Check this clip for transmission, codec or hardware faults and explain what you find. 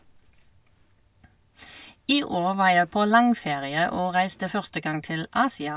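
Nothing turned up here; the speech comes across without any transmission, codec or hardware trouble worth pointing out.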